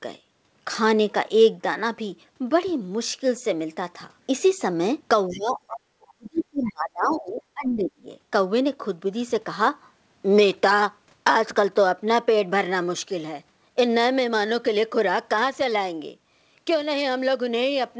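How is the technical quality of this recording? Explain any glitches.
The recording has clear echo-control problems concentrated between about 5.3 and 8.1 s, where a second voice bleeds in and the main speech is pushed down.

Other side's voice leaking through, at 5.29 to 5.54 s, 6.65 to 6.72 s and 7.12 to 7.19 s: the echo canceller likely failed to fully subtract the far end's loudspeaker sound from the microphone signal. Short scraps of a second voice remain, roughly 25 dB below the main speech in the first two bursts and about 20 dB below in the third. They are brief fragments rather than sustained crosstalk.

Speech suppressed in double talk, from 5.32 to 8.09 s: with both ends active at once, the canceller likely could not tell the local talker from the returning echo and attenuated everything. About two seconds of that span are affected, and the speech drops by as much as about 35 dB, so it sinks. 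The whole clip is band-limited with nothing above 8 kHz, which fits a wideband call codec such as G.722.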